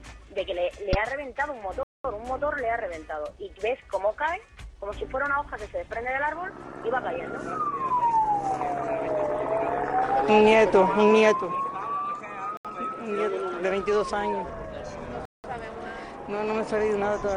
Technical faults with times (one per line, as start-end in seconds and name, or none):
1.83-2.05 Bluetooth stall
12.57-12.65 Bluetooth stall
15.25-15.44 Bluetooth stall